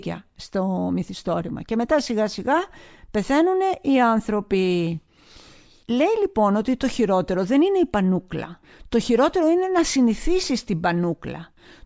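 No technical faults can be heard anywhere in this speech recording. There are no events to place in time order.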